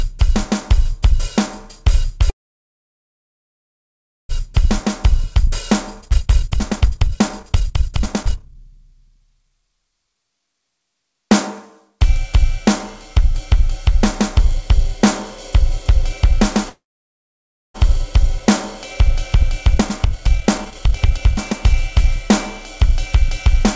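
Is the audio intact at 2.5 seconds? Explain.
No. At 2.5 s the audio is inside a call audio freeze from 2.30 to 4.31 s: the last sound carries on only briefly, then about 2 s of silence, likely from late packets emptying the jitter buffer. Unlike a dropout, nothing is lost. The sound resumes where it stopped, just later.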